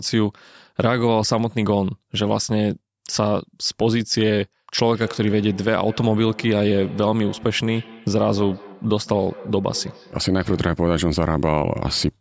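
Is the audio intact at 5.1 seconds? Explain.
No. At 5.1 seconds the clip is inside a feedback echo between two devices, running from 4.88 to 10.91 s. A second device on the same call replays this microphone's signal, which is picked up again and escapes echo cancellation. The speech returns about every fifth of a second, at about 19 dB below the direct speech. On a spectrogram, fainter copies of each speech pattern sit at regular offsets, all below the 8 kHz ceiling of the call processing.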